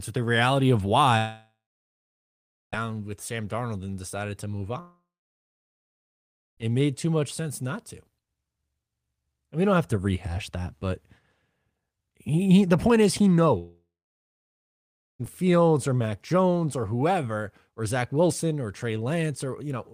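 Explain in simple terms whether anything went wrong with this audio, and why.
Yes, something went wrong, most likely a long network dropout, when audio stopped arriving. After "the reality of" (1.17–2.74 s), "and decided to move" (4.80–6.59 s) and "the point is he" (13.58–15.21 s), a brief fading buzz gives way to silence, and speech resumes with those stretches missing.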